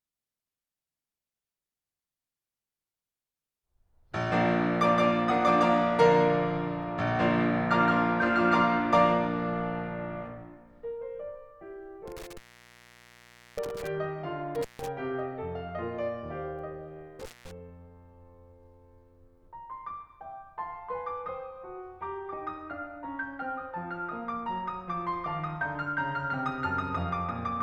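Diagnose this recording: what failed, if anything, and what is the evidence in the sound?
Intermittent contact at 12.08–13.87 s, 14.55–14.88 s and 17.20–17.51 s: a loose analogue cable or plug opens, cutting the music out with crackly edges for up to 1.2 s.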